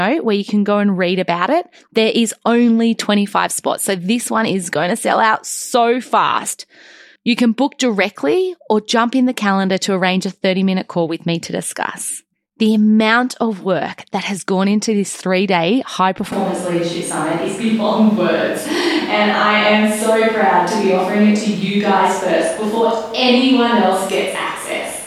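From 16.3 s to the end, the speech suddenly goes roomy and thin, with room noise about 25 dB down. That's likely a switch to a distant microphone.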